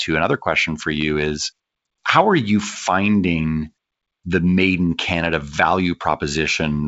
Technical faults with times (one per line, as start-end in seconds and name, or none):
none